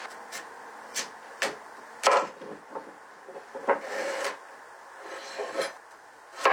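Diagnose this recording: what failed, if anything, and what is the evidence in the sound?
Nothing stood out on listening to these sounds that would point to a failure at any stage of the chain.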